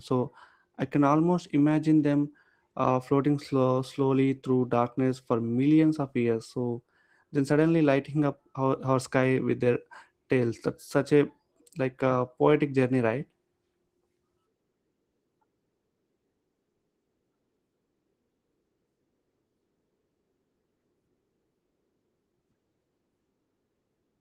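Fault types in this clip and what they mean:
Opus voice compression: The speech sounds hoarse, muffled and faintly robotic throughout. This fits Opus at a low rate, around 16 kbps, coding the lower band with coarse linear prediction and the band above 8 kHz only sketchily.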